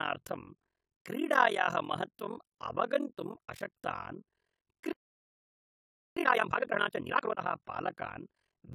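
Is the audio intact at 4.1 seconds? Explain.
No. At 4.1 seconds the sound is swirly, smeared and hollow, with blurred attacks. This is likely generation loss from around four lossy re-encodes, which fits a 96 kbit/s AAC-LC chain. On a spectrogram it shows as patchy holes.

Overlap-add ripple is also present there. Frames rejoined with a mismatched overlap make the level dip by about 60 dB roughly forty times a second, a rough flutter. The waveform shows a regular comb of deep notches in the envelope.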